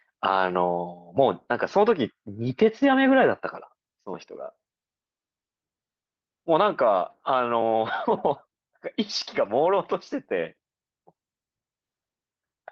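No technical faults can be heard anywhere in the speech.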